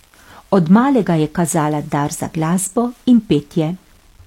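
Throughout the speech, a grainy, gritty distortion rides on the sound and shifts with it. This is low bit depth without dither. Quiet passages turn rough, and the softest parts sputter or drop out. The error sits roughly 40 dB below the signal. It likely comes from rounding to 8 bits.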